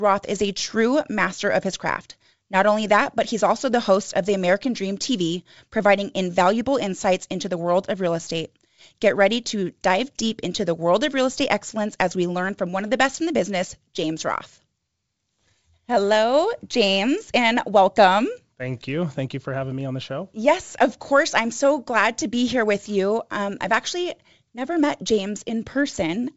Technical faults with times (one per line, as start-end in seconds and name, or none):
none